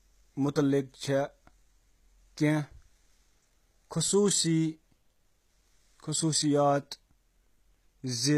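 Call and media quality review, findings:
Gritty, metallic sibilants throughout the speech, likely HE-AAC compression at a bitrate near 20 kbps. Replicated treble misaligns harmonics. Spectrogram: copied upper bands, nothing above 14.9 kHz.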